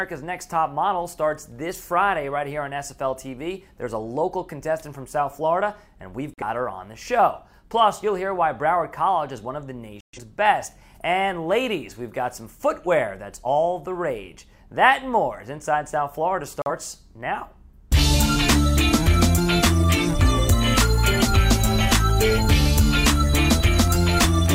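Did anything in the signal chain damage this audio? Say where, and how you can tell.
Yes: short silent holes at 6.34–6.43 s, 10.01–10.18 s and 16.62–16.71 s mark a digital broadcast dropout, where the receiver muted over lost or corrupted frames.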